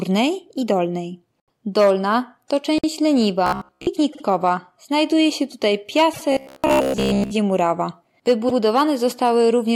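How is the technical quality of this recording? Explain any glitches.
The recording has two recurring glitches, stuttering repeats and a metallic buzz, that break up the speech at several points.

Repeated frames: short stutters at 1.37 s (after "i dolnej"), 2.78 s, 4.12 s, 6.13 s (after "się tutaj") and 8.48 s. Blocks of 26 to 78 ms of compressed audio were played again one to three times, each adding 50 to 100 ms.

Robotic sound from repeated short buffers: from 3.46 to 3.87 s, and from 6.32 to 7.31 s after "się tutaj", the speech becomes a rigid buzz near 67 Hz. This is likely because audio arrived late and roughly 15 ms buffers were looped, replacing most of the real signal.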